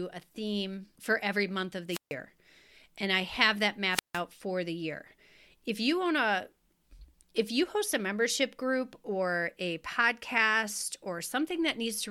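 Two wireless microphone squelch dropouts break this speech: at 1.89 s after "for every month of", and at 3.90 s after "and I have that", before "for the year". Each time the radio link fades, hiss rises briefly, and the receiver's squelch mutes the output for about 0.15 s and 0.16 s.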